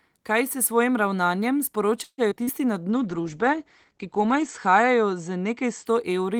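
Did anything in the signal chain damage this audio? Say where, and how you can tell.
Yes. At the network stage, the jitter buffer appears to have run dry from 2.03 to 2.21 s, which is most likely a call audio freeze caused by packets arriving late. The receiver extended the last sound for about 145 ms as a fading buzz or hiss, and about 60 ms of that is near-silent. When the packets arrived, playback resumed where it had left off. Nothing was lost, but the delay grew by 145 ms.

Two short concealed packet losses follow, from 2.30 to 2.34 s and from 2.44 to 2.50 s. Each time, about 40 ms of the stream never reached the decoder. The decoder covered the holes by extrapolating the preceding sound and then crossfading back, so each one is heard as a brief smear or wobble rather than a dropout. Around the first one, the buffer also shed roughly 30 ms of the earlier added delay.

From 2.93 to 5.92 s, a call bitrate drop comes from the codec stage. 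The bandwidth estimate fell, and the encoder went from 32 kbps down to 11 kbps, staying at the lowest rate for about 1.5 s. At that rate the audio band narrows from 20 kHz to 8 kHz and coarser quantisation sets in, so the sound turns muffled and watery until the rate recovers.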